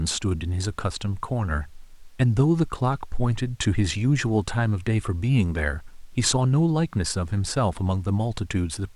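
No technical faults turn up anywhere in the speech, so there is nothing to set out in time order.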